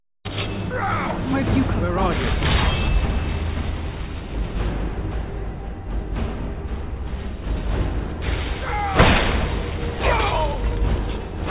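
No technical faults are audible.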